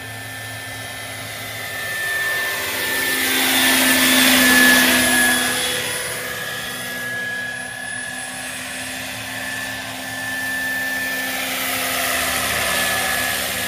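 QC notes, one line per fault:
13.03–13.06 s, compressed frames skipped: the sound lurches forward, dropping roughly 50 ms of audio near the very end of the clip. Whole frames of the encoded stream were never played, either because they were absent from the file or because the decoder rejected them as damaged. The audio jumps ahead by the length of the frames left out.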